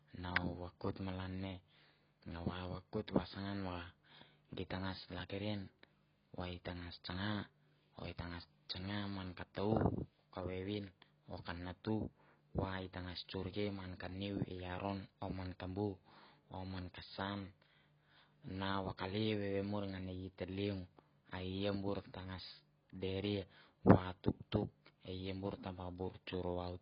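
Right at the start, at 0.36 s, just before "vakoit malan ne", there's a sharp little snap sitting on top of the speech. That's an electrical switching spike, most likely a nearby switch, relay or static discharge arcing briefly and getting picked up on the audio line. A second one hits from 23.90 to 23.92 s, right after "bur tangas deria", a touch longer.

Underneath all of that, the whole clip carries heavy AAC compression. Nothing comes through above 5.1 kHz, so the speech sounds dull and boxed-in, and the sibilants and held vowels have that fizzy, warbling smear you get when the encoder is starved and punches holes in the spectrum. The amount of damage points to AAC-LC at something around 16 kbps.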